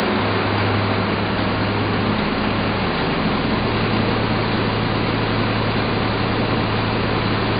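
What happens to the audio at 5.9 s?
Nothing goes wrong at 5.9 s; the sound carries on intact through that moment, with no dropout, click, distortion or other fault.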